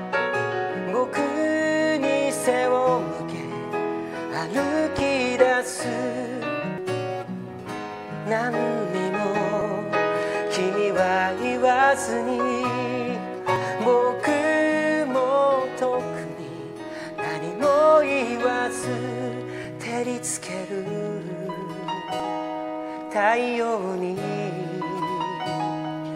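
At 4.99 to 5.01 s a single loud pop sits on top of the sound, peaking at roughly 15 dB above the surrounding level while the audio carries on beneath it. The likely cause is a brief voltage pulse, from a plug, switch or static discharge, entering the chain. On a waveform it appears as one tall, narrow spike; a spectrogram shows a thin vertical stripe spanning the whole frequency range.

From 6.78 s there are dropped buffers (overrun): the audio skips forward at 6.78, 9.61, 13.56, 18.11, 19.64 and 22.20 s. The first loses about 150 ms and the rest about 50 ms each, likely because the program fell behind and the hardware overwrote samples before they were read. There is no gap, just an abrupt splice. The waveform shows a sudden discontinuity, and the spectrogram a vertical line where the sound jumps.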